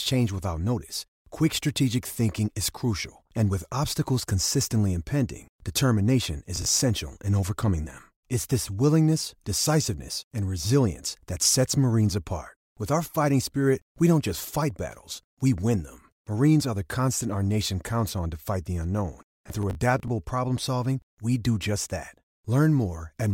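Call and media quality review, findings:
Processor overload crackle, 6.56–6.81 s: short gritty burst after "obstacles consistently impending determination", clearing before "in overcoming them". Several missed deadlines on small buffers of around 10 ms, each filled with a hard-edged repeat of old audio.

Processor overload crackle, 19.29–20.08 s: longer tearing crackle after "to fight the unknown", ending before "problem solving we do". Sustained CPU load; a dozen or more buffers replayed stale audio.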